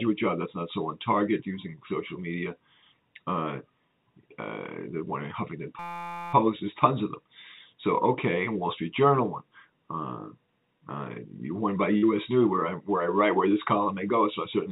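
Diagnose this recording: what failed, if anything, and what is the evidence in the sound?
A system hang loop struck at the driver or buffer stage from 5.79 s to 6.33 s. The host stalled while the audio hardware kept replaying the same ring-buffer segment, a 5.8 ms slice that fits a 256-sample buffer. Repeated about 90 times at 172 Hz, that tiny loop is heard as a steady, pitched buzz for roughly half a second instead of a stutter. Little or no real audio appears to be missing.

Short concealed packet loss occurred on the network side of the call path from 11.98 s to 12.04 s. About 40 ms of audio never reached the decoder in time, and the receiver filled a 42 ms gap by extending the preceding sound before crossfading back into the real signal. The result is a brief smear or wobble at that point. The G.711 mu-law call path carries it, with nothing present above 4 kHz.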